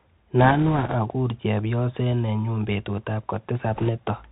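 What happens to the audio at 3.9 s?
Just before 3.9 s, from 3.75 to 3.89 s, the speech hits bit errors on a Bluetooth voice link. Flipped bits in the one-bit CVSD stream each nudge the waveform only slightly and their effect fades quickly, so instead of loud clicks a rushing, crackly noise rides over the speech, pointing to an error rate of a few percent. The waveform gains fine jagged fuzz with no tall spikes, and the spectrogram shows a brief wash of noise below 4 kHz.

Under this, as throughout, the Bluetooth CVSD headset codec at 64 kHz is plainly audible. Its adaptive up-down steps pass nothing above 4 kHz, leave s sounds scratchy and lay a granular hiss beneath the speech. The spectrogram shows a hard ceiling at 4 kHz with a grainy noise floor below it.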